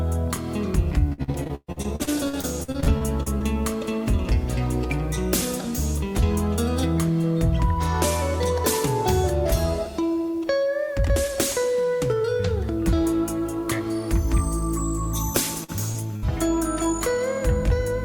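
Repeated packet loss, giving a robotic sound, runs from 1.09 to 3.42 s. Over that stretch about twenty separate holes open up in the stream, the longest lasting 129 ms, and roughly 0.66 s of audio never arrives. The receiver bridges each hole by stretching the preceding sound, so close to a third of the span is patched rather than real. The result is choppy audio with fragments dropped out.

Short concealed packet loss follows at 15.64 to 15.70 s, where about 40 ms went missing, and again at 15.92 to 15.96 s, with about 20 ms lost. In each case the decoder extends the last sound across the hole and then blends back into the incoming signal. What reaches the ear is a brief smear or wobble.

A burst of packet loss comes at 16.16 to 16.24 s, when about 60 ms of consecutive audio fails to arrive in time. Concealment carries the final sound forward and turns it down as the gap continues, so the audio briefly becomes a held buzz or a fading hiss. 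It then picks up further along, and the stretch in between is missing.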